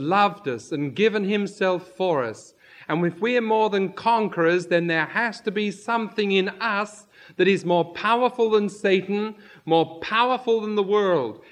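No technical faults can be heard in this audio.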